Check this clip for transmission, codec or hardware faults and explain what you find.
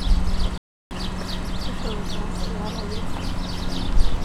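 One fault: a playback stall from 0.58 to 0.91 s. The sound cuts to silence for about 330 ms, then resumes, likely because the player ran out of buffered data.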